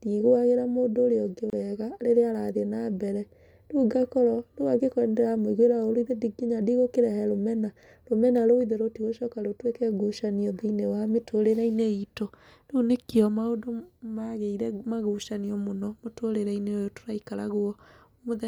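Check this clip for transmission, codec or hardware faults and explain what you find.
One fault: a gap at a join of encoded pieces, 1.50 to 1.53 s. Separately encoded segments were spliced untrimmed, so encoder delay and end padding leave a 28 ms silence. Speech cuts out briefly, then resumes; waveform and spectrogram show a narrow blank column with smeared edges.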